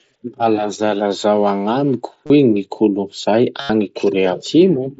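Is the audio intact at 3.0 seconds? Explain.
Yes, the speech at 3.0 seconds plays through intact, with no dropout, click or other fault at that moment.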